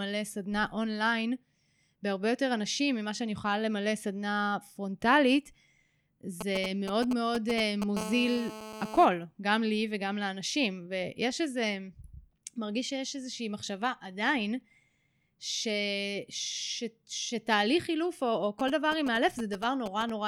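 A nearby 2G phone starts exchanging short control transmissions with its network, and the audio circuitry rectifies each radio pulse. From 6.41 to 7.97 s these GSM signalling bursts come through as a galloping dit-dit-dit of ticks and brief 217 Hz buzzes, roughly 5 dB below the speech. The same pattern returns from 18.60 to 20.10 s, somewhat quieter at around 10 dB under the speech.

At 7.97 s the phone moves into a call and transmits continuously in bursts 217 times a second. The rectified pulses become a steady GSM phone buzz until 9.05 s. It is a hard, raspy 217 Hz drone with a dense stack of harmonics, about 11 dB below the speech. It has no connection to what is being said, so it sits fixed underneath the speech rather than following it.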